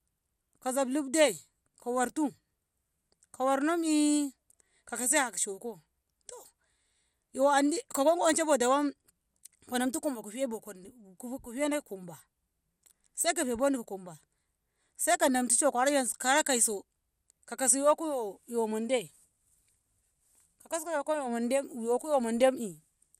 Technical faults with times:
0.00-23.19 MP2 compression

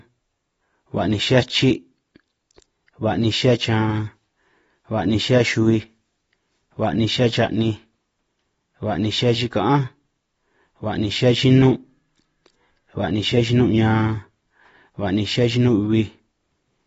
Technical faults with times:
0.00-16.86 AAC compression

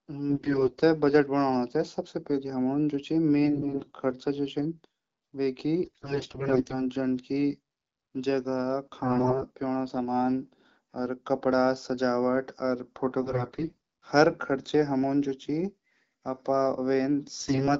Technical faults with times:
0.30-0.81 AMR bit errors
3.44-3.91 AMR bit errors
5.84-6.84 AMR bit errors
9.03-9.44 AMR bit errors
13.22-13.77 AMR bit errors
17.39-17.69 AMR bit errors

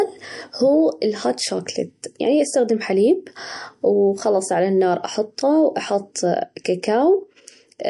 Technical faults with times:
0.00-7.89 MP3 compression

